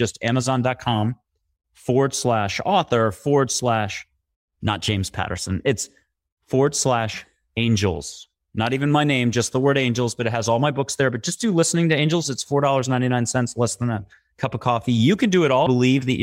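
At about 15.65 s, a stream segment was likely skipped: one piece of the segmented stream failed to load and playback carried on with the next. The speech jumps abruptly forward, with a small blip at the join and part of the programme missing.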